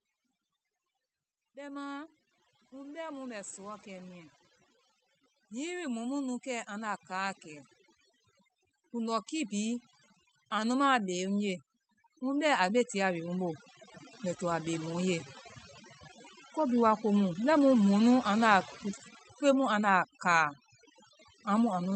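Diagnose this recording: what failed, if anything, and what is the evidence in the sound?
Overdone noise removal in the call processing stage, present for the whole clip. The background drops and breaks up into twinkling specks. The suppressor is cutting frequency bands it takes for noise, and the quiet parts of the speech go with them.

Automatic gain rising, also in call processing, happens twice: from 1.38 to 4.32 s by about 6 dB, and from 5.48 to 15.09 s by about 15 dB. Speech and background swell together, because the gain control judged the input too quiet and raised it gradually.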